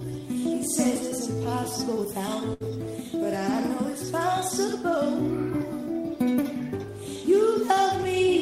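At about 2.53 s there's a burst of packet loss running to roughly 2.63 s. A short run of packets never made it in time, so the receiver padded the hole by stretching out the last bit of sound it had, around 68 ms of it, letting it sag in level as it went. Then playback picks up again with about 60 ms of the original simply gone, so you hear a brief smeared, fading stretch followed by a small jump forward.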